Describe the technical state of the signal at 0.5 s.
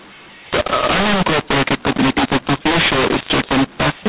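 At 0.5 s the speech carries the mu-law and A-law mix-up present across the whole clip: A-law telephone samples are decoded as mu-law, which scrambles levels and lifts the quietest samples into a hiss. Unlike clipping, the harshness reaches low-level passages and pauses, within the normal sub-4 kHz telephone band.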